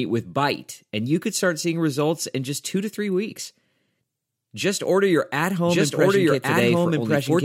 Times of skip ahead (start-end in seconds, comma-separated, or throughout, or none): none